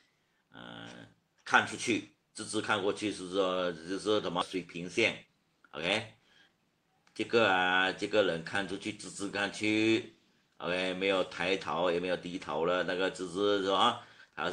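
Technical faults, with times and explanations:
4.41–4.43 s, skip ahead: Playback jumps forward with essentially no gap, and roughly a second of audio is missing. The sound on either side of the cut is butted together directly, so it is heard as an abrupt discontinuity rather than a silence. A stretch of audio was discarded in transit or dropped by the jitter buffer when it overflowed while later audio was already queued, cutting the buffered delay by about a second in one step.
4.55–5.70 s, jitter buffer speed-up: For just over a second the audio runs at about 109% of normal speed with its pitch unchanged, so it sounds slightly hurried. The receiver's jitter buffer was holding more audio than its target, likely because delayed packets arrived together. To bring the delay back down, it repeatedly removed short pieces of one or a few pitch periods each, taking out roughly a tenth of a second in total.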